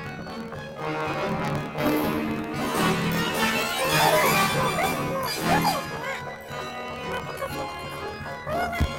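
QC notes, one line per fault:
Throughout: planar audio read as interleaved. The sound carries a robotic buzz pulsing at about 38.3 Hz, with content pushed up 12 semitones, an octave. Each 26.12 ms block stores all left samples followed by all right samples, but playback treats them as alternating left-right pairs. Every block therefore plays twice at double speed, first its left half and then its right. This keeps the overall pace correct while raising pitch and chopping the audio at the block rate.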